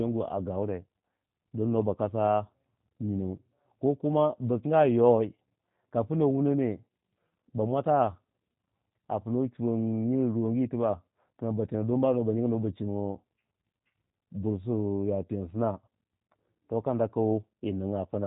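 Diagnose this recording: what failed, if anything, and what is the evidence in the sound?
The failure sits at the codec stage: the speech has been through G.729 coding, and the damage is plainly audible from start to finish. Nothing above about 3.8 kHz survives, so sibilants lose their edge. The speech is rebuilt from a vocal tract filter, a pitch predictor and a few pulses per frame rather than the original waveform, giving it a rough, slightly synthetic grain. That fits a low-rate 8 kbit/s VoIP path.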